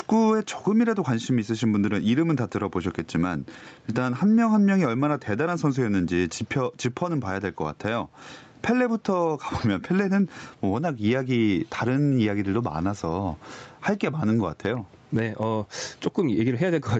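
Gain pumping runs throughout the speech. The gain swings about 10 dB, likely pulled down under loud syllables by a fast limiter. The waveform looks flattened.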